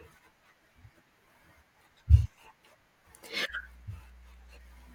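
A ground loop or nearby transformer starts coupling the 60 Hz power line into the signal at 3.49 s, and the mains hum runs to the end of the speech. It is a steady low drone with some low harmonics, sitting roughly 25 dB under the voice.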